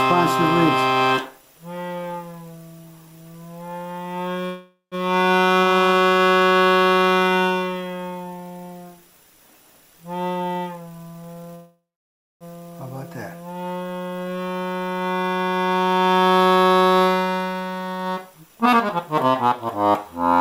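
Two call audio freezes interrupt the audio, at 4.45 to 4.95 s and 11.55 to 12.44 s. Each time the last sound is stretched into a fading buzz that drops to silence, for about 0.14 s in the first and 0.61 s in the second. The cause is likely late packets emptying the jitter buffer. Playback then resumes where it stopped, with nothing lost but 462 ms and 857 ms of delay added. Jitter buffer speed-ups follow at 10.34 to 11.49 s (135% speed), 15.69 to 18.68 s (114%) and 20.16 s to the end (162%). The receiver trims pitch-period slices to shed excess buffered delay, roughly 0.4 s in each of the first two, so the audio sounds hurried at unchanged pitch.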